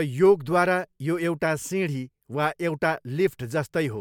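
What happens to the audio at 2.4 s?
Nothing goes wrong at 2.4 s; the speech carries straight through that point with no dropout, click, distortion or other fault.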